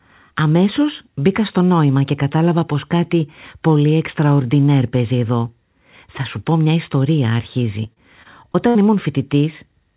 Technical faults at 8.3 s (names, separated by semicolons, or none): repeated packet loss (robotic sound)